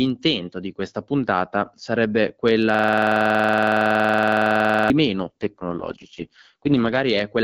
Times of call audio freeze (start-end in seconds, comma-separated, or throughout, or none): none